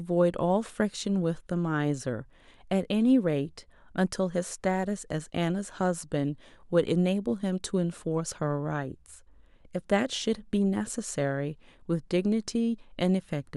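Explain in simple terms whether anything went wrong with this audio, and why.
Nothing went wrong with this speech recording, and there are no technical faults anywhere in it. No moment stands out as broken, so there is no time that needs explaining.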